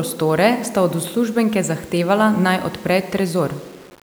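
No technical faults occur at any point in the speech, so there is nothing to place in time order.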